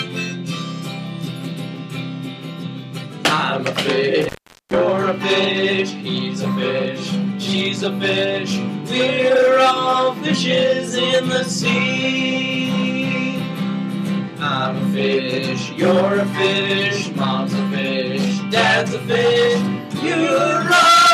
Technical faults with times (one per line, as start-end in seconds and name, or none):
4.21-4.76 intermittent contact